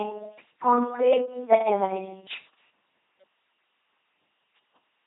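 From start to finish this speech runs through an LPC-10 vocoder, and it's heavily mangled. Each moment is rebuilt from a small all-pole vocal tract filter fed either by a pulse train or by noise, with no middle ground, so the voice comes out as a flat, buzzing robot. The damage sounds like a 2.4 kbit/s stream, and nothing survives above about 3.8 kHz, which leaves it dull and boxy as well as mechanical.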